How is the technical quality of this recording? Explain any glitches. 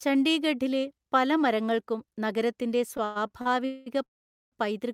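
The recording has clear network-delivery faults concentrated in the second half of the speech.

From 2.97 to 3.47 s there are repeated stalls (stutter): four short gaps, the longest 110 ms, totalling 180 ms. The jitter buffer kept running dry, so the receiver stretched the last sound over roughly a third of that span. Nothing is lost, but delivery drags and stutters.

Two call audio freezes follow, likely from packets held up in transit emptying the jitter buffer. From 3.65 to 3.88 s, 208 ms of continued sound fills the wait as a buzzy hold without silence. From 4.04 to 4.54 s the held sound fades to silence for about 470 ms before the speech resumes where it stopped.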